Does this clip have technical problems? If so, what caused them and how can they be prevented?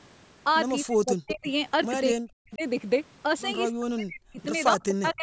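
Yes. Speech suppressed in double talk: the speech drops by up to about 40 dB at 0.84–1.47, 2.13–2.63, 3.71–4.39 and 4.88–5.23 s. The likely cause is an echo canceller muting both talkers while the sides overlapped. Prevent it with a canceller that handles double talk well, or a headset.

Echo leak: at 1.28–1.48 s a copy of the speech returns 255 ms late, roughly 10 dB below it, likely because loudspeaker echo slipped past cancellation. Prevent it with headphones or lower loudspeaker volume.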